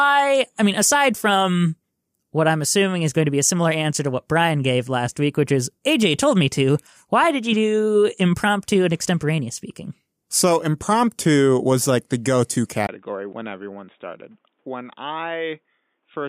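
Input switched to a poorer device at 12.87 s, after "like the go to". Following a 20 ms gap the speech turns boxy, loses everything above 3.8 kHz, drops about 10 dB and carries faint new background noise, likely a headset or lesser microphone.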